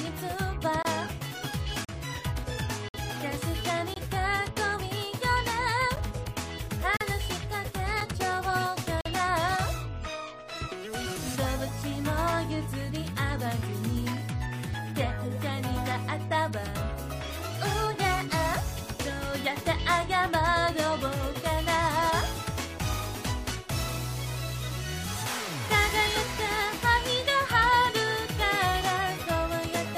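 Gaps between stream segments cut hard-edged silences into the audio at 0.83 s (25 ms), 1.85 s (38 ms), 2.89 s (57 ms), 3.94 s (22 ms), 5.96 s (10 ms), 6.97 s (38 ms), 8.01 s (7 ms) and 9.01 s (45 ms). The near one-second spacing points to 1-second segments whose timestamps leave a short hole that the player fills with silence.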